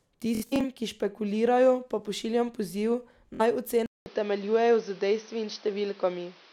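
A speech recording with two kinds of fault. The Bluetooth link dropped audio packets twice, and the receiver filled each gap by replaying its last short slice of sound until fresh data arrived. From 0.35 to 0.65 s, about 160 ms goes missing in bursts spread over roughly 280 ms, the longest run about 70 ms, giving a buzzy machine-gun stutter just before "ki špekulirajo pa pošiljam". A shorter Bluetooth stutter of about 46 ms follows at 3.35 to 3.41 s, right after "špekulirajo pa pošiljam poziv". At 3.86 s the input likely switched to a poorer device, such as another microphone or a headset's call profile, and that device stays in use to the end of the clip. Just after "pa pošiljam poziv naj" there is a 200 ms silence at the changeover. From then on nothing above 6.2 kHz comes through, so the speech turns duller and boxier. A new background noise sits roughly 30 dB below the speech, while the loudness stays about the same.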